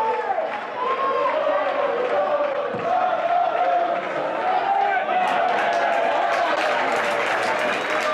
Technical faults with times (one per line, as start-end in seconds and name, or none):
2.52-2.55 broken MP3 bit reservoir
6.55-6.58 broken MP3 bit reservoir